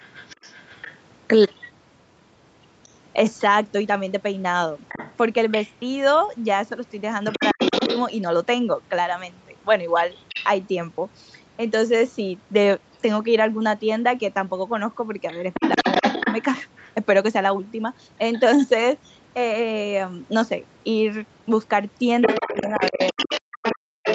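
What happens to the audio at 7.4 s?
Speech suppressed in double talk, from 7.36 to 7.6 s: the main talker's voice abruptly drops away, falling to near silence in its deepest part and cutting out in pieces for a total of roughly 150 ms within that window. This is likely the echo canceller reacting to two people talking at once; unable to tell the local talker from the loudspeaker echo, it turned everything down, taking the wanted voice with it.

Other side's voice leaking through, from the start to 10.45 s, so it is still present at 7.4 s: a second voice sits underneath the talker, only a little quieter than the main speech. The likely cause is a loudspeaker on the talker's device playing the far end back into the microphone, with the echo canceller failing to remove it.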